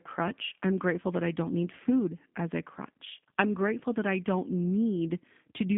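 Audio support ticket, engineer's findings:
G.729 codec, whole clip: speech band-limited to roughly 150 Hz–3.5 kHz, empty above 3.6 kHz on spectrogram; rough, synthetic texture from 8 kbit/s pulse-model reconstruction, plainly audible.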